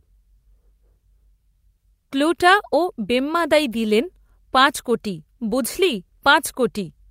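Nothing here calls for comment: the speech runs along with no technical faults to point to at any moment.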